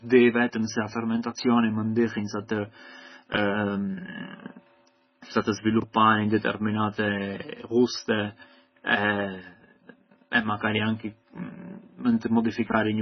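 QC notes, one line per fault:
Throughout: MP3 compression, likely at a very low bitrate near 16 kbps; nothing above 6 kHz, speech sounds dull and watery with swirling, metallic sibilants.
3.34–3.38 s, 5.80–5.84 s, 12.70–12.74 s: chunks out of order; a 20 ms chunk plays one chunk late, briefly jumbling the speech.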